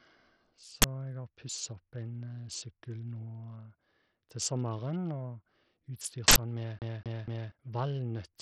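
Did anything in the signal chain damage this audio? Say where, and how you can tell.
Yes. Throughout the speech the treble thins out and flickers, and a gritty, aliased noise rides on every syllable. That points to the codec stage, likely Bluetooth SBC compression at a low bit pool, around 64 kbps. Unlike tape or filter roll-off, the top end comes and goes instead of fading smoothly.

At 0.82 to 0.84 s and again at 6.28 to 6.36 s there are short, very loud bursts of harsh digital noise, about 20 ms and 80 ms long. This is an uninitialised buffer at the driver or buffer stage: leftover memory played as samples. A dropout would go silent rather than blast noise.

From 6.79 to 7.52 s the same 0.24 s stretch of sound plays three times, with a brief mute at each jump. The evenly spaced stutter marks a CD stuck on one turn at the storage and playback stage, the laser falling back one track per rotation. 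A buffer underrun repeat would not loop so regularly or mute between passes.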